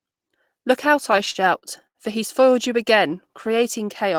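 Repeated stalls (stutter) run from 1.03 to 1.98 s: speech arrived too slowly for playback, so the buffer emptied eight times, each gap patched by extending the last sound, up to 78 ms. About 193 ms is stretched out, nothing lost, but the speech drags and stutters.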